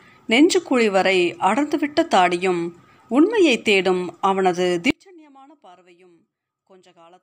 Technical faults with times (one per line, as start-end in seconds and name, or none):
4.90-7.23 audio dropout to a faint residue